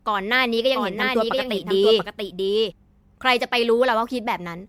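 Across the whole speech clip there is generation loss. The sound is swirly and hollow, consonant attacks are smeared, and nothing remains above 19.6 kHz. That degradation is heavier than a single MP3 pass at around 96 kbit/s would leave. The likely cause is audio decoded and re-encoded about seven times, each pass quantising on a shifted frame grid so noise and spectral holes pile up. A single low-bitrate encode would sound thin but not this churning.

From 0.74 s to 2.72 s a doubled audio track appears. A second full-band copy of the speech runs roughly 0.7 s behind the original and a few dB quieter. It is likely a second, slower capture path or an edit holding two out-of-step copies. Unlike a room echo, the copy has no decay or reverberant colour, and it cuts in and out abruptly at those two points.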